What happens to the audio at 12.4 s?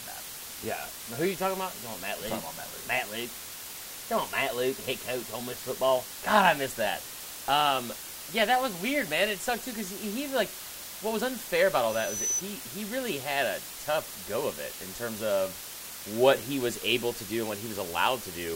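A loudspeaker feedback squeal is ending. It runs from 11.88 to 12.43 s, starting just after "what was unfair about" and stopping just before "he really had a". A microphone is picking up the speaker it drives. At 6 kHz the loop gain exceeds one, so that frequency keeps feeding itself. It swells over roughly 0.4 s into a squeal. By 12.4 s it is about as loud as the speech, and then it cuts off.

Under it, and through the whole speech clip, is a low bit depth with dither fault. The audio uses only 6 bits. Dither added before rounding turns the rounding error into steady white noise rather than distortion. That noise sits roughly 10 dB below the speech. It is heard as a constant, even hiss, and it is still there at 12.4 s.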